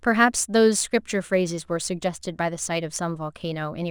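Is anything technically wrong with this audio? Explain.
Yes. Sample clock jitter runs throughout the speech: an unsteady converter clock of around 2 µs RMS mistimes samples, so error tracks waveform slope, adding roughness roughly 30 dB below the signal on loud, bright sounds. Unlike steady background hiss, it vanishes in pauses.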